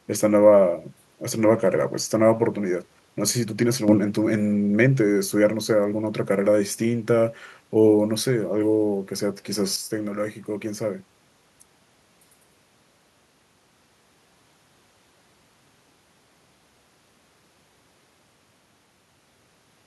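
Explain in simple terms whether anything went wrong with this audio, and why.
A volume setting was likely switched instantly instead of smoothly, a sudden gain jump: speech and hiss jump louder at 3.88–3.98 s, then quieter at 9.76–11.00 s.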